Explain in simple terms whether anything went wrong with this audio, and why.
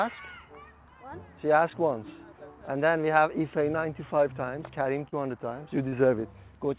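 Two brief dropouts occurred, at 5.08 s and 5.88 s, each a short concealed packet loss of about 40 ms. A small piece of the call arrived too late for the decoder, so the receiver covered each gap by extending the sound just before it and then blending back into the real audio. The result is a quick smear or wobble, and anything very short in those moments can disappear. Everything passed through a telephone-style call codec, which leaves nothing above 4 kHz.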